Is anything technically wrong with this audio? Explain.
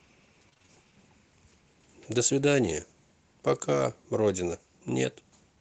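Yes. From 0.49 to 0.73 s there is repeated packet loss (robotic sound). Five short gaps, the longest 25 ms, are patched by stretching the preceding audio, so about half that stretch sounds choppy. Unlike a single dropout, it is a rapid string of patches. This comes over a call path whose high end stops near 8 kHz, which fits Opus at a low bitrate.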